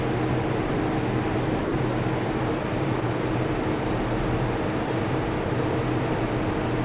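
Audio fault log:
0.68–0.70 s, 1.64–1.72 s, 2.62–2.64 s, 3.00–3.02 s, 4.86–4.88 s, 5.44–5.46 s: sound dropped by the voice detector. Brief stretches, mostly 20 ms and one of 80 ms at 1.64 s, where the sound gives way to flat, low-level noise before resuming abruptly. This is likely because the sender's detector judged these moments to be background and stopped transmitting, and the receiver filled the gaps with comfort noise. On a waveform, each one appears as a sudden notch of small, even amplitude. On a spectrogram, it shows as a narrow vertical strip of uniform, featureless noise interrupting the structured content. All of it sits below a hard 4 kHz ceiling, which points to a narrowband telephone codec such as 64 kbps G.711.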